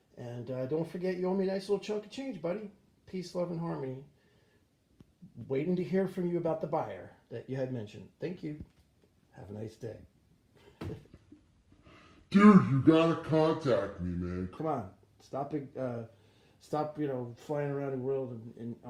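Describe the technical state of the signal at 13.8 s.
At 13.8 s the audio sits inside a section at the wrong speed, running from 11.07 to 14.58 s at 0.735 times normal, likely from playback against a mismatched clock. Everything sounds slower and about five semitones lower. On a spectrogram, harmonics shift downward and stretch in time.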